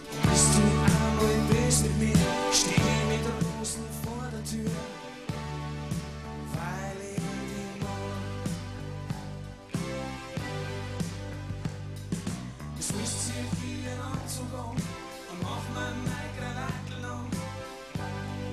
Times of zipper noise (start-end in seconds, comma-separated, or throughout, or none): 2.81-3.59